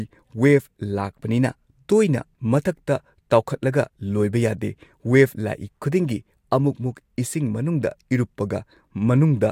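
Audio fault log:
Nothing stood out on listening to the speech, so there is nothing to log.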